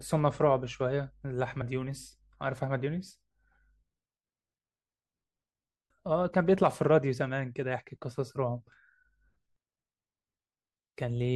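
Speech with compressed frames skipped at 1.60 s and 7.78 s. Each time the audio jumps ahead, by about 50 ms and then about 20 ms, matching whole frames of about 23.2 ms.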